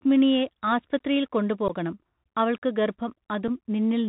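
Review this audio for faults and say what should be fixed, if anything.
The speech was carried over a Bluetooth CVSD headset codec, a narrowband link that codes each sample as a single up-or-down bit and adapts its step size, which fits a 64 kbps CVSD link. Nothing above 4 kHz survives. Throughout the clip the damage is plainly audible: a granular hiss sits under the speech, s sounds turn scratchy, and loud high-frequency sounds distort where the step cannot keep up. Prevent this by routing the audio through a wideband headset profile such as mSBC or LC3, not CVSD.

Unconcealed Bluetooth headset packet loss occurs twice. Voice packets between headset and phone were dropped and replaced with silence or an idle pattern instead of being concealed. The first loss, from 1.68 to 1.71 s just after "ആസ്പ്ത്രിയിൽ കൊണ്ട്", cuts out about 15 ms, roughly a couple of packets. The second, at 3.48 s, removes 7.5 ms, likely a single packet. 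Each leaves a short hole with abrupt edges that can click. Prevent this by keeping the headset close with a clear radio path and enabling packet-loss concealment on the receiving side.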